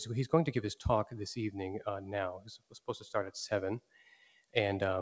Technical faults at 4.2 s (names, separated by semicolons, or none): noise suppressor applied to music or sounds; sound cut by the noise suppressor